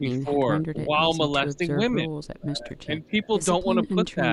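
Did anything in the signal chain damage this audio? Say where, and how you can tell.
Yes. Speech suppressed in double talk shows up at 0.0 to 0.39 s, 0.84 to 1.0 s, 1.46 to 3.28 s and 3.64 to 4.23 s. Within these spans the level dips in short bursts, by up to about 15 dB at the start and end and about 5 to 10 dB in between. This points to the call-processing stage. The likely cause is an echo canceller that could not tell the near talker from loudspeaker echo while both sides spoke, so it attenuated everything.

An echo leak appears at 3.04 to 3.1 s and again at 4.08 to 4.14 s. Each time, a faint copy of the speech returns 268 ms late, about 35 dB and then about 30 dB below the direct sound. It is brief and scrappy. It most likely comes from the far end's call processing. That end's echo canceller left some loudspeaker pickup in its microphone signal, and the residue was transmitted back with a round-trip delay.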